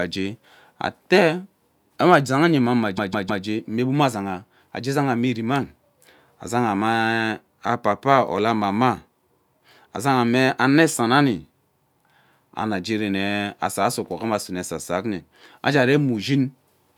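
At 2.97 s the speech hits repeated frames: a 157 ms chunk, which fits a run of six compressed frames, plays three extra times before moving on at 3.44 s. You hear a stutter, and it adds about 0.47 s.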